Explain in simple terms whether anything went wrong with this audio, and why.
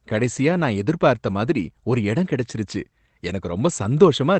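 Between about 1.29 and 1.35 s, just after "கடைசியா நான் எதிர்பார்த்த" and before "மாதிரி ஒரு எடம் கிடைச்சுருச்சு", the speech briefly turns rougher and noisier. This is a lost packet rebuilt from error correction. A short piece of the call's audio went missing, and the next piece carried a rough backup copy that the receiver played instead. That kept the sound from dropping out, at the cost of about 40 ms of lower quality. The length fits roughly two lost packets.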